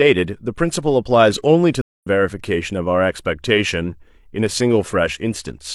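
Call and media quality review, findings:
Speech cuts out at 1.81 s, with about 207 ms of dead silence through 2.07 s. It resumes roughly a tenth of a second further along, so a short stretch is skipped. Stream reconnect: the connection dropped, the player went quiet, re-established the stream, and started a fresh decoder mid-stream at a later live position.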